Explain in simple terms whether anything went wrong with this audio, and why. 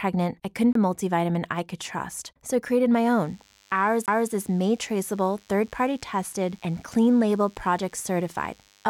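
Two things went wrong. A CD skip hits at 0.73 to 0.75 s and again at 4.06 to 4.08 s. Each time the disc player briefly goes silent and jumps to another spot in the speech. From 3.05 s to the end, a DECT cordless phone buzz sits under the speech. It is a thin, steady 100 Hz hum from a nearby cordless phone's radio signal.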